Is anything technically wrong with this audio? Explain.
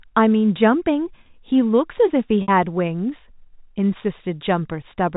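Yes. From 2.42 to 2.48 s the speech briefly holds a single buzzy, slightly frozen tone before carrying on. This is packet loss with pitch repetition. About 60 ms of audio went missing, consistent with a few lost packets, and the receiver filled the gap by repeating the last pitch period. The telephone band comes from G.711 coding, which cuts everything above 4 kHz.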